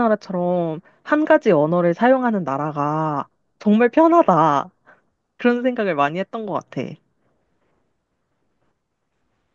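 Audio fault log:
Nothing stood out on listening to this speech recording.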